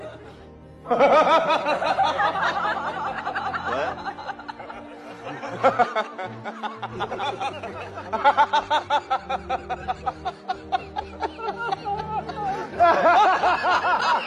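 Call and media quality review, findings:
No audible faults found; no action required.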